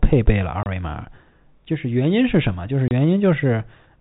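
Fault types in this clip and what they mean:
Packet loss filled with silence: Chunks of audio went missing in transit, and the receiver played silence instead of covering the gaps. The speech is cut twice, at 0.63 to 0.66 s and at 2.88 to 2.91 s. Each hole lasts 30 ms, which fits one lost 30 ms packet. The sound stops and restarts abruptly. The rest of the audio carries the narrow telephone band of G.711 coding.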